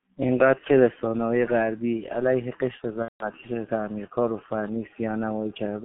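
The whole speech clip runs through a G.723.1 codec at 6.3 kbit/s, confined to a 150 Hz to 3.4 kHz line band, so it sounds heavily muffled and hoarse with smeared consonants. From 3.03 to 3.30 s there's VoIP packet loss concealed by the speech codec: about 180 ms went missing, which fits six 30 ms frames, and the decoder stretches the last sound into a fading buzzy tone or coloured noise.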